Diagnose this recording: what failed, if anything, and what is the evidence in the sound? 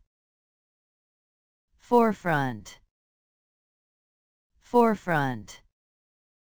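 A fine hiss and grainy roughness ride on the sound for the whole clip, swelling with loud passages and bright, high-frequency content and fading away in silence. That points to sample clock jitter at the converter stage. An unsteady clock, wandering by a few microseconds, takes each sample slightly early or late. The resulting error scales with how steeply the waveform is changing, sitting roughly 30 dB below the signal.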